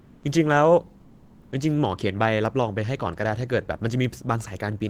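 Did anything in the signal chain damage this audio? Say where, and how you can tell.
Yes, at the codec stage. The background is replaced by comfort noise twice: from 0.00 to 0.23 s, and from 1.01 to 1.51 s. In both gaps the room tone turns smooth and featureless, about 31 dB below the loudest sound. Its level barely shifts, by about 1 dB at most. The likely cause is discontinuous transmission, such as Opus DTX. The sender stops coding during pauses, and the receiver fills them with synthetic, roughly matched noise.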